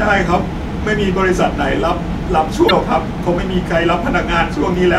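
Damaged data in a compressed stream hits the speech from 2.65 to 2.71 s. Corrupted bytes there make the decoder misread the frames, lose sync and hunt for the next valid frame header, so the voice is briefly broken by a short digital glitch.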